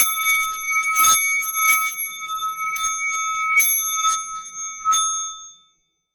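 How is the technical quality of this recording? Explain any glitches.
The recording has hard clipping in four bursts: 0–0.32 s, 0.98–1.18 s, 1.63–1.77 s and 3.57–4.09 s. The sound is driven about 11, 8, 6 and 5 dB past full scale, so the peaks are cut flat. This gives crackle on the peaks, turning to a harsh fuzz where the overload is heaviest, which shows as squared-off waveform tops and bright vertical smears high in the spectrogram.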